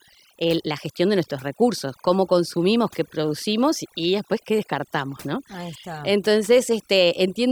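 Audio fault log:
Throughout, overdone noise removal: the noise reduction on this speech was pushed far too hard. Individual frequency bands are being pulled right down or switched off whenever their level sits near the noise estimate, so the background drops and breaks up into twinkling specks of leftover noise. The softer components of the voice fall under the same threshold and are removed with it.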